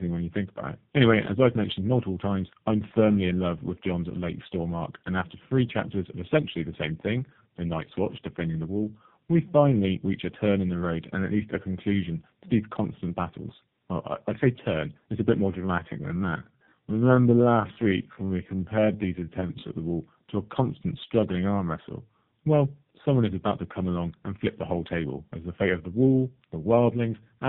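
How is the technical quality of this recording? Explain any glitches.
The recording has two technical problems: coding damage that runs through the whole clip, and one section that has been slowed down.

Tandem speech coding affects the entire clip. The call appears to have passed through two model-based speech codecs in a row, with a plain telephone link between them. The sound fits a chain from G.729A at 8 kbit/s through G.711 mu-law to AMR-NB at 7.95 kbit/s. Each border meant decoding and re-encoding, so the second coder was working on audio the first had already degraded. The result is speech that is rougher, noisier, more muffled and more warbly than either codec alone would produce.

A time-stretched section runs from 15.49 to 19.75 s. Software likely stretched this stretch of audio to fill a set length, running it at about 0.70 times normal speed. It kept the pitch unchanged by repeating short pieces of the signal. 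The pace drops abruptly at 15.49 s and the speech drags while the pitch holds steady. Normal pace returns at 19.75 s.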